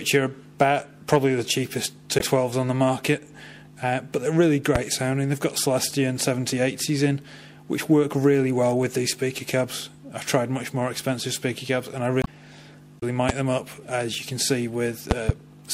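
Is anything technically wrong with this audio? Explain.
Yes, there are two kinds of fault.

The first is damaged data in a compressed stream, at 2.17 to 2.21 s, 12.21 to 12.28 s and 12.98 to 13.03 s. Some of the encoded bytes there are wrong, so the decoder can't make sense of those frames. It loses sync and hunts for the next valid header. You hear each one as a short chirp, squawk, click or hole, and the two near 12 to 13 s come close together.

The second is a loud pop, at 4.75 to 4.78 s (about 15 dB above the sound), 13.29 to 13.32 s, and 15.11 to 15.32 s, where there are two pops in quick succession. The last two are about 20 dB above the sound. Each is likely a sudden voltage step or pulse from a plug, switch, static or driver glitch, shaped by the circuitry after it. They come through as sharp pops or thumps sitting on top of the sound, which carries on underneath.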